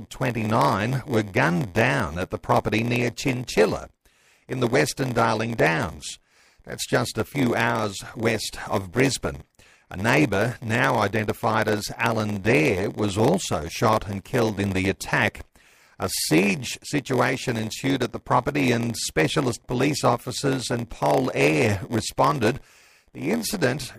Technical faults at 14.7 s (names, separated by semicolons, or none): block size mismatch (padded)